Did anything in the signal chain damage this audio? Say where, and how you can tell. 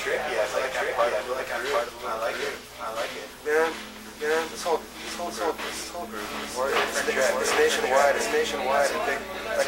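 Yes. Throughout the clip, a doubled audio track is present: every event is followed by a second, full-band copy roughly 0.7 s later, at about the same level as the first, with no decay or room colour. On a waveform each burst appears twice at that fixed spacing, and a spectrogram shows identical patterns repeated side by side. The likely cause is either the signal being captured a second time through a slower path or an edit holding two copies out of step.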